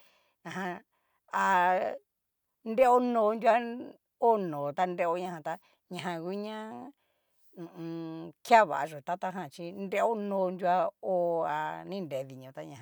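No faults can be heard.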